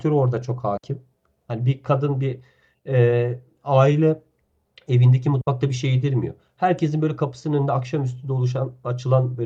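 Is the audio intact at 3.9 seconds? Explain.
Yes, the speech at 3.9 seconds is intact, with no fault at that moment.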